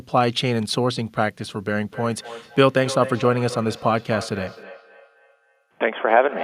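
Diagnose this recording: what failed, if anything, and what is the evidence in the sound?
The failure is in call processing: a feedback echo between two devices. From 1.87 s to the end of the clip, the speech returns at a fixed interval of roughly 0.3 s. The returning copy sounds thinner and more ringing, and peaks about 13 dB below the direct speech. Two devices in the same room share the call. Each one's echo canceller removes only its own playback, so the other device's output loops back through the microphone.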